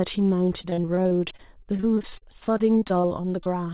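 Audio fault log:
0.62–3.47 s, repeated packet loss (robotic sound): around thirty brief holes, the longest 40 ms, each filled by extending the preceding sound, so roughly a fifth of the stretch is concealed. The result is choppy audio with pieces missing, heard over narrowband call audio limited to 4 kHz.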